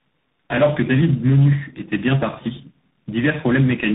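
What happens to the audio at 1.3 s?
At 1.3 s, as throughout, tandem speech coding is heard: repeated decoding and re-encoding through what sounds like three speech codecs, plausibly ending in CVSD, leaves rough, muffled, warbly speech with nothing above 3.8 kHz.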